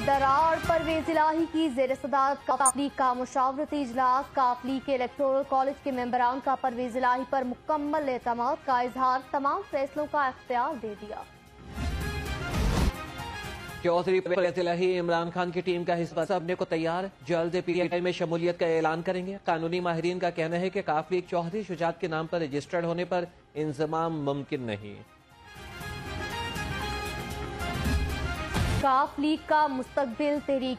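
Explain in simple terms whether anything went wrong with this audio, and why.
Something did go wrong: frames out of order. At 2.51, 14.26, 16.08 and 17.73 seconds, two neighbouring chunks of sound play in swapped order. Each chunk is about a tenth of a second, or about 0.14 seconds at 16.08. You hear a brief garbled flutter, but no time goes missing.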